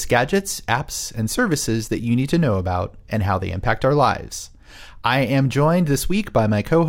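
Nothing in the speech stood out as a technical problem on listening.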